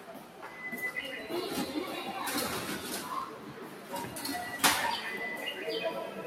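A noise suppressor built for speech stays on through the whole clip. It cannot tell steady sound from noise, so it keeps turning the level down and back up. The swing runs to around 10 dB. Held parts sink and fading tails get trimmed, while sharp onsets slip through. The result pumps and flutters. The sound also thins in body wherever it stays steady for a moment.

From 0.0 to 0.49 s, the sound is cut by the noise suppressor. The opening is pulled down by up to about 6 dB. It comes in muted, then recovers. This happens again from 3.36 to 3.93 s. The sound sags by about 6 dB there. Both dips last about half a second.

At 3.22 s there is a fault from overlapping chunks. The audio was handled in 2-second blocks. Each new block began 13 ms before the previous one ended. That short slice plays twice at the join. It is heard as a brief tick or stutter. The same join fault returns at 5.23 s, about 2 seconds later. 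That spacing fits the block size. The repeated slice is again 13 ms.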